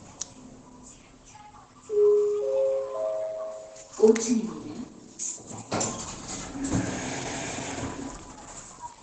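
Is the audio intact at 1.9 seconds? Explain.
No. At 1.9 seconds, as throughout, the sound is muffled and hoarse, likely from heavy Opus compression in speech mode at a low bitrate. A spectrogram shows nothing above 9 kHz.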